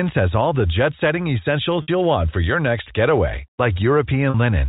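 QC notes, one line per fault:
1.82–1.88 s and 4.30–4.34 s, packet loss with pitch repetition: 60 ms and 40 ms go missing, fitting three and two 20 ms packets. The last pitch period loops across each gap, a brief buzzy hold. Waveform shows identical repeating cycles; spectrogram shows frozen, flat harmonics.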